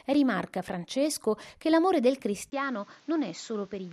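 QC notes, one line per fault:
2.5 s to end, input switched to a poorer device: after a 20 ms gap the speech turns duller and a few dB quieter, with nothing above 7.4 kHz and a new, faint background noise well below the speech, likely from a switch to a narrower-band microphone.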